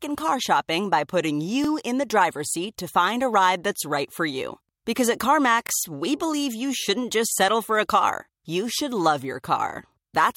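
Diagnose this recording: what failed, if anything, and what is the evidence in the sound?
Overlapping chunks at the buffering stage: small stutters at 1.65–1.67 s (after "car shopping by putting"), 5.67–5.70 s, and 9.70–9.72 s (after "you should love your"), spaced 4.0 s apart. Each chunk begins 25 ms early, replaying that slice. A waveform shows the duplicated segment; a spectrogram, a thin vertical seam.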